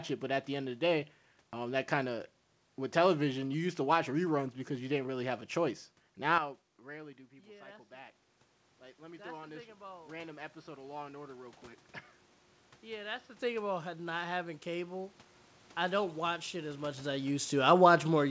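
From 6.38 s to 13.39 s the sound turns dull and narrow, with nothing above 5.8 kHz, and drops about 10 dB with no gap at the change. A faint new noise floor sits well below the signal. The likely cause is the input switching to a poorer device.

Between 8.97 s and 11.65 s the voice and background swell together by about 7 dB. This is automatic gain rising: the input had fallen about 13 dB, so the gain control slowly pushed the level back up and lifted the noise with it.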